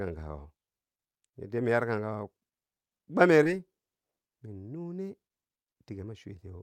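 This speech clip has one fault: a short concealed packet loss at 3.43 to 3.47 s. About 20 ms of audio never reached the decoder in time. The receiver covered the gap by extending the preceding sound, then blended back. It is heard as a brief smear.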